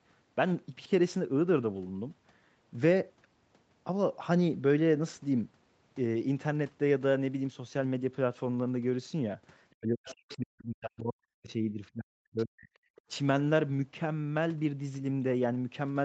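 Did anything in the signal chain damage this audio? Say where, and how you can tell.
Yes. Call processing likely misread double talk, so speech suppressed in double talk dips by up to about 40 dB, breaking up from 9.75 to 12.71 s.

The echo canceller also left residue: the other side's voice leaking through faintly at 10.05–10.37 s, 12.37–12.45 s and 12.96–13.01 s, about 20, 25 and 30 dB down, likely from incomplete echo removal.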